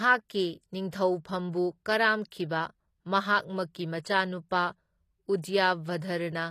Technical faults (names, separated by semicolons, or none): HE-AAC compression; pre-echo